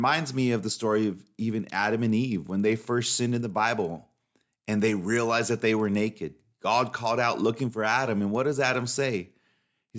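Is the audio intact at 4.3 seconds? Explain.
No. A resampler restarted on every block affects the whole clip. Each 50 ms block was converted from 24 kHz to 16 kHz separately. Its edges leave a 20 Hz ticking buzz under the speech.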